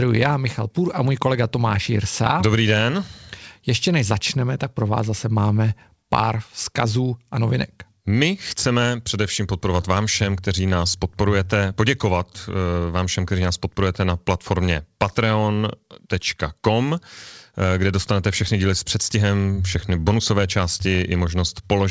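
The sender's clock runs roughly four percent faster than the receiver's, a clock drift between sender and receiver that keeps overfilling the jitter buffer throughout this speech. From 0.04 s to 21.7 s the receiver makes repeated timing corrections, trimming short slices to track the 104% pace, heard as small, unevenly spaced hiccups and a faintly unsteady tempo. The G.722 call path caps everything at 8 kHz.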